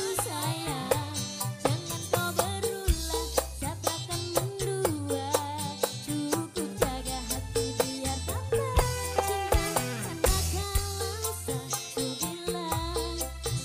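No dropouts, clicks, distortion or other technical faults can be heard at any point in the clip.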